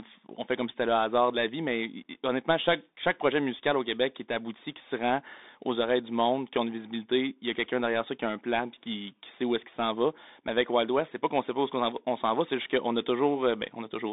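From start to end the speech carries the Bluetooth CVSD headset codec sound: a narrow 250 Hz to 3.7 kHz band with nothing above 3.8 kHz, a granular hiss underneath, and scratchy s sounds where the one-bit up/down steps, consistent with a 64 kbps stream, cannot follow fast transients.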